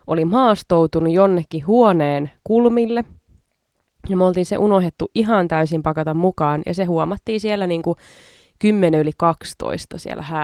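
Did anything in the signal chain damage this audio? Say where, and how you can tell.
No, nothing in the chain has damaged this speech, which has passed through Opus voice compression at about 24 kb/s in hybrid mode with the full band kept and only light coding effects.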